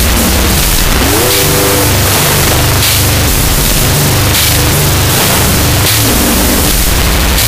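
Throughout the clip, wrong sample width: data written as 16-bit integers are being read back as unsigned 8-bit values, so each original sample splits into two. The high bytes carry a coarse, offset copy of the real signal, while the low bytes become loud, harsh noise. Because there are now twice as many samples, the audio plays at half speed, an octave low, buried and distorted under that hiss.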